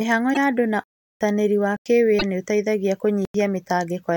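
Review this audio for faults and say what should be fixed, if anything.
Two spots sound like a broken MP3 bit reservoir, likely because frames were dropped from the stream: the frame after each cut reaches back for data that belongs to a different frame and decodes it wrong. The speech jumps ahead from 0.33 to 0.37 s, just before "ya andũ na", and again from 2.18 to 2.23 s, each roughly 40 ms long, between one and two 26.1 ms frames. Cut or splice MP3 streams only on frame boundaries and reset the decoder after any lost frame.

Three blocks of digital silence likely come from the output buffer going unfilled, with samples replaced by zeros. The speech drops to dead silence and returns. The longest gap runs from 0.84 to 1.21 s, right after "ya andũ na", and lasts 371.5 ms, which fits a 16384-sample block. Two shorter holes of 92.9 ms each, consistent with 4096-sample blocks, fall at 1.77 to 1.86 s and 3.25 to 3.34 s. 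Give the audio thread enough priority and buffer headroom that it never misses a deadline.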